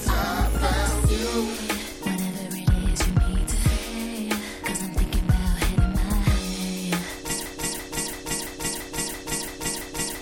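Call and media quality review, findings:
Broken-record loop, 7.46 s to end of clip. Playback or stream source likely stalled and kept re-sending its last buffered fragment. A 0.34 s piece repeats identically, back to back, 8 times with no recovery before the clip ends. Content due in that window never arrives.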